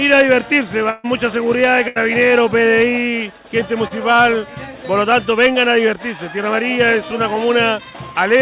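At 0.90 to 1.06 s and again at 1.88 to 1.98 s there is a burst of packet loss, about 140 ms and 80 ms of audio missing. The receiver extends the last sound and fades it, giving a held buzz or dying hiss before playback jumps ahead.

Between 3.88 and 3.92 s, short concealed packet loss removes roughly 20 ms. The gap is patched with a synthesized continuation blended back into the real signal, heard as a brief smear or wobble in audio whose content stops at 4 kHz, consistent with G.711 mu-law.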